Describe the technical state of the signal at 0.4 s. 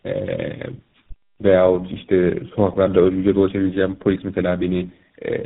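At 0.4 s the speech carries tandem speech coding, present throughout. It was decoded and re-encoded across links ending in GSM full rate, three speech codecs stacked, so it sounds rough, muffled and warbly. A spectrogram shows nothing above 3.8 kHz and smeared, unstable harmonics.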